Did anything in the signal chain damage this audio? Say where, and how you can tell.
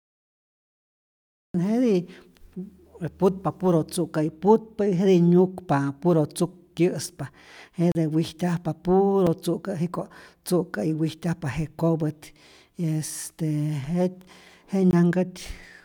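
Yes. Cut-off start at 0 to 1.54 s: the file holds digital silence until 1.54 s, then the speech jumps in mid-sound with no attack or fade. Capture or the stream began late, so the opening of the utterance was never recorded.

Blocks of digital silence at 6.77 s (about 7 ms), 7.92 to 7.95 s (33 ms), 9.27 s (4 ms) and 14.91 to 14.93 s (20 ms): each drops abruptly to zero and back. This points to a driver or buffer stage leaving output buffers unfilled.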